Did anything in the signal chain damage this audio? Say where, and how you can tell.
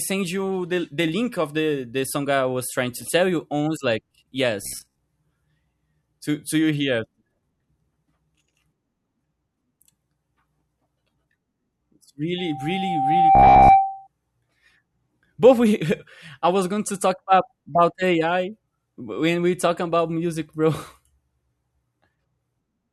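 Yes. Between 4.63 and 4.99 s, and again from 13.35 to 13.70 s, the speech turns into a rigid, metallic robotic sound with a fixed 66.8 Hz buzz. This likely comes from repeated short buffers at the driver or buffer stage, each about 15 ms, covering roughly half the audio in the first event and most of it in the second. A spectrogram shows evenly spaced harmonics at 66.8 Hz, and the waveform shows identical repeating segments.

From 12.38 to 14.07 s, loudspeaker feedback squeal enters through the acoustic path between playback and microphone. A single 778 Hz tone builds over about a second to roughly 10 dB above the speech, because the loop gain exceeds one at that frequency. A spectrogram shows one narrow horizontal line that brightens steadily.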